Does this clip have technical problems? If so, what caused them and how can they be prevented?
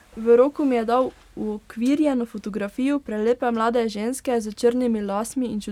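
No, this clip has no technical problems, so there is no cause to identify and nothing to prevent.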